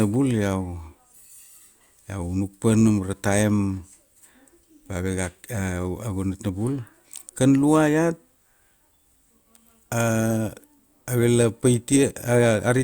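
Nothing in the recording of speech points to a technical fault at any point.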